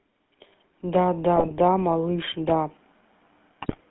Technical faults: GSM full-rate codec; GSM bit errors

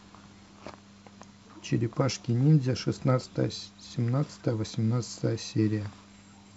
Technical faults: DAB burbling

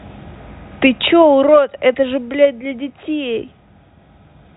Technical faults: none

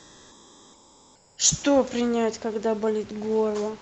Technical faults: comfort noise in place of the background

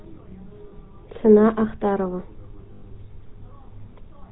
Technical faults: GSM full-rate codec; lost GSM frames

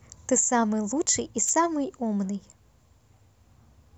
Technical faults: wireless microphone noise hit

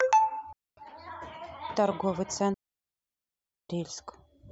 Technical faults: digital wireless dropout

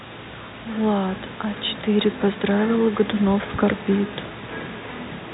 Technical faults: none

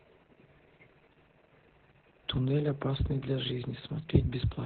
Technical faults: Opus voice compression

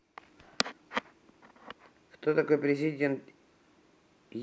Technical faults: none

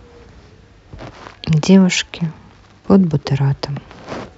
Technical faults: none

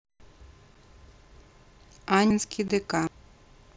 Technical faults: unconcealed Bluetooth headset packet loss; dropped buffer (overrun)

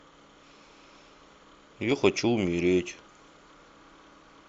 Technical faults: none

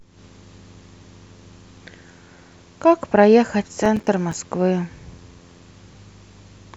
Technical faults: processor overload crackle

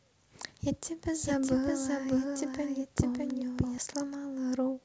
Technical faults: doubled audio track

